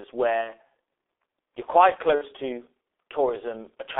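Right from the start the whole thing has that G.723.1 codec sound. It's a low-rate internet-telephony coder running at around 6.3 kbit/s, and the line only passes roughly 300 Hz to 3.6 kHz, so everything's muffled and a bit hoarse. The damage is heavy: the codec's voice model updates slowly across its 30 ms frames, so consonants smear together and transitions lose their edges.

At 0.41 s there's a dropout handled by VoIP packet loss concealment, running to about 0.55 s. The gap fits roughly 60 ms of lost audio, or two of those frames. The decoder keeps repeating its last pitch and filter with the gain dropping, so you get a short stretched, fading sound instead of real speech, and it sounds weak for a moment after the real signal returns. The same thing happens again from 2.15 s to 2.24 s, another loss of about 60 ms with the same stretched, decaying sound.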